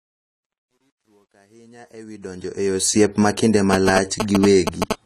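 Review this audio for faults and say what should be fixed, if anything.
The speech is dull and smeared throughout, with a fizzy, warbling edge on sibilants, and nothing above 14 kHz. This is likely AAC compression at a low bitrate, consistent with about 32 kbps AAC-LC. The coder quantises its frequency lines coarsely, dropping the top band and blotting detail. A spectrogram shows a hard ceiling at 14 kHz with patchy holes below it. Encode at a higher bitrate or keep an uncompressed master for editing.

From 0.0 to 3.04 s the smooth fade-in carries truncation distortion on a fade, worst from 0.0 to 1.94 s, ending just before "ma kinde". The fade's gain stage keeps too few bits and adds no dither, which fits roughly an 11-bit path. The quiet start turns gritty. On a zoomed waveform the low-level signal appears as square stair-steps, with broadband hash on the spectrogram. Apply fades at high resolution and dither before reducing word length.

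From 3.73 to 4.93 s, right after "ma kinde", GSM signalling bursts come through as a galloping dit-dit-dit of short 217 Hz buzzes, about as loud as the speech. A nearby 2G phone's radio bursts are rectified by the audio circuitry. A spectrogram shows vertical lines with harmonic combs spaced at 217 Hz. Keep phones away from the recording chain or switch them to flight mode.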